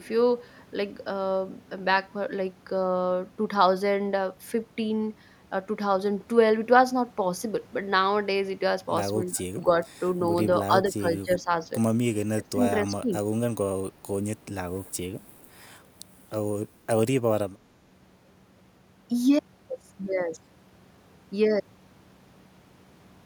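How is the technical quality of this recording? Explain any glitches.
The recording has two recurring glitches in the middle of the clip, both tied to how the call handled echo.

From 9.24 to 9.71 s, 10.67 to 11.68 s and 12.33 to 13.14 s, the speech dips by up to about 15 dB and partly drops out. This is speech suppressed in double talk, likely the echo canceller turning the talker down while both sides spoke.

At 9.35–9.43 s, 14.85–14.94 s and 15.39–15.45 s, a faint scrap of the voice repeats 254 to 268 ms later, about 30 to 40 dB down. This is echo leak, likely loudspeaker pickup that slipped past the canceller.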